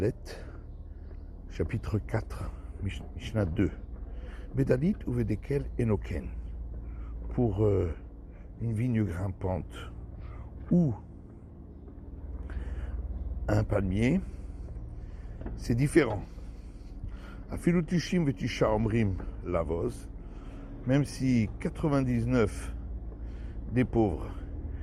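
Skip ahead at 3.01 s: roughly a second of audio vanishes and playback jumps straight to later material with almost no gap, as audio already waiting in the jitter buffer replaces the dropped stretch. Jitter buffer speed-up from 3.10 to 5.18 s: the receiver trims short pitch-period slices to shed its excess delay, so the sound runs at about 108% speed with unchanged pitch, losing roughly 150 ms overall.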